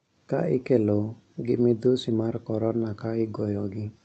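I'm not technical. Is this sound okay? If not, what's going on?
Yes, nothing is wrong here: the speech came through a normal internet call connection, which trims the highest sounds above about 8 kHz, as calls routinely do.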